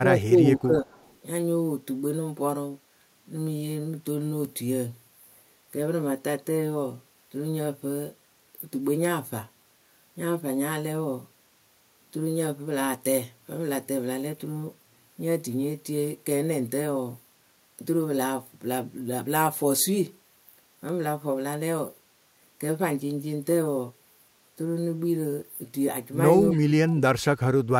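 Speech recording with two echo-control problems, both at the edges of the clip. The echo canceller likely failed to separate its own talker from loudspeaker pickup during double talk and turned everything down, so the speech is suppressed in double talk: from 0.0 to 0.91 s it dips by roughly 15 dB, and from 26.52 to 27.02 s it drops much harder, by around 30 dB. That canceller also likely left a residue, an echo leak, sent back 266 ms late: a faint copy of the voice at 0.92 to 1.18 s, about 35 dB down, and a brief scrap at 26.52 to 26.58 s, about 30 dB down.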